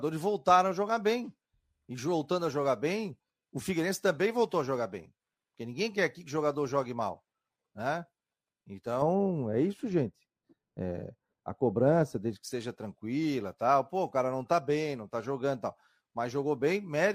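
From 9.02 to 12.43 s, just before "seja tranquila tal", the speech turns dull and muffled, its treble rolled away. This is de-emphasis applied wrongly: a treble cut meant to undo pre-emphasis hit audio without any, or was applied twice, sloping the response down about 11 dB at 10 kHz.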